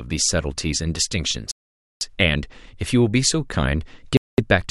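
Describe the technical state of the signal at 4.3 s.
At 4.3 s the speech has dropped out entirely in a Bluetooth stall running from 4.17 to 4.38 s, a gap of about 211 ms. The likely cause is radio interference holding back packets until the headphones' buffer emptied, so playback paused until retransmitted data arrived. It sounds like an abrupt cut to silence with the audio resuming afterward. On a waveform it is a flat line with hard edges, and on a spectrogram a clean vertical blank band across all frequencies.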